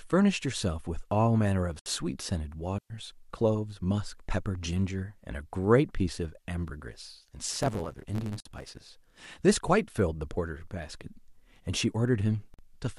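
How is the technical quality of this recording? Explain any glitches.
The recording has several glitches: three short silences at encoder joins, one wireless dropout, and a stretch where the speech is chopped and sped up.

At 1.79 s, 8.40 s and 12.54 s the speech stops for about 68 ms, 51 ms and 47 ms. These are gaps at a join of encoded pieces. Each segment was encoded separately and spliced without trimming the encoder's start delay and end padding, so silence sits between them. The edges are abrupt but slightly smeared by the codec, and the speech resumes where it left off. No content is lost.

From 2.78 to 2.90 s there is a 117 ms hole of near silence. This is a digital wireless dropout: the link lost too much data and the receiver muted with a very fast fade. Unlike the join gaps, it is longer and its edges are clean fades rather than codec-smeared cuts. Unlike an analogue dropout, no burst of noise comes before or after it.

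From 7.53 to 8.79 s the speech takes on a 100 Hz buzz and runs about 1.16 times faster while keeping its timbre. This is a block size mismatch with truncation. One stage writes longer blocks than the next reads, and the tail of each block is discarded. The rate fits a 512-sample write block, with each clipped boundary producing the buzz. Unchanged timbre at higher speed separates it from a sample-rate error, and the steady buzz separates it from random packet loss.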